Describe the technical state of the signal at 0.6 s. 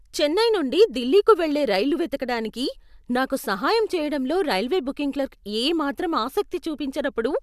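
At 0.6 s the speech signal is intact, with no audible dropout, distortion, glitch or other technical fault at that moment.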